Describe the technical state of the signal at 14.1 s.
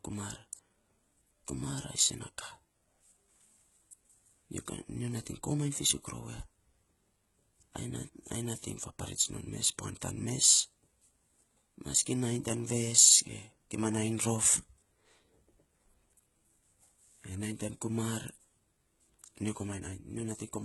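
At 14.1 s you're hearing the same HE-AAC compression damage that runs through the whole speech clip. The treble is rebuilt from copied lower bands, so the s sounds come out gritty and lispy, nothing sits above 11.8 kHz, and the heavy damage likely comes from a very low bitrate around 16 kbps.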